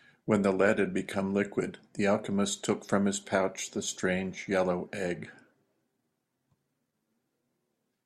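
A speech recording with nothing technically wrong with it.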